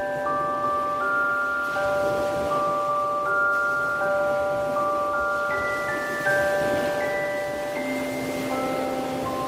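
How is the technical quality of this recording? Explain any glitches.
No audible glitches or faults.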